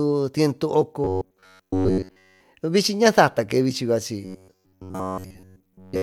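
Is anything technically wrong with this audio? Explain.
Yes. From 1.04 to 2.41 s and again from 4.25 s to the end, the speech has robotic sound from repeated short buffers. Playback likely starved and looped a chunk of about 10.7 ms, forcing a rigid 93.8 Hz metallic buzz onto the speech throughout the first stretch and across most of the second.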